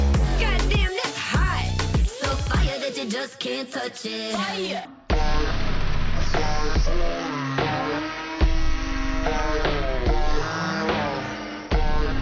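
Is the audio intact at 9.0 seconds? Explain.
No. At 9.0 seconds the clip is inside a wrong sample rate fault that runs from 4.85 s to the end. The samples are being played far slower than they were captured, with no conversion. This fits 44.1 kHz material played back at 16 kHz. Speed drops to about 0.36 times normal. Pitch falls by about 17.6 semitones. The sound is dragged out, deep and heavy.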